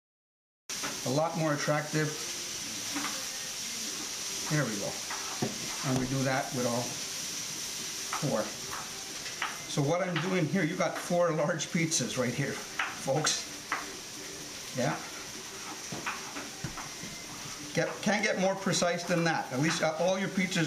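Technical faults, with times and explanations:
0 to 0.70 s, cut-off start: digital silence until 0.70 s, then the sound begins mid-stream with no attack or fade, because capture started late.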